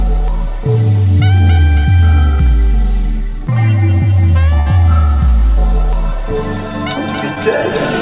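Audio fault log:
4.60–4.67 s, burst of packet loss: roughly 60 ms of the stream never arrived in time. The receiver kept the last bit of sound going and faded it down across the hole, so you hear a short held, dimming patch, and then the sound picks up 60 ms further on.
7.35–7.37 s, short concealed packet loss: a tiny 10 ms dropout, patched by extending what came just before and blending back in. It comes across as a quick smear or wobble. The narrowband call path has nothing above 4 kHz, consistent with a G.711-style codec.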